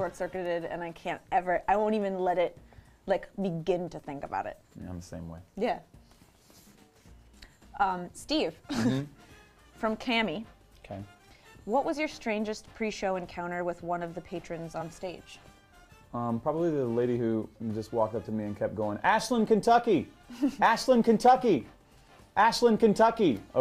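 Around 14.80 to 14.82 s there's a case of compressed frames skipped. Roughly one frame's worth of audio, something like 20 ms, never gets played, either because it's missing from the file or the decoder threw it out as damaged. The sound just hops forward by that amount.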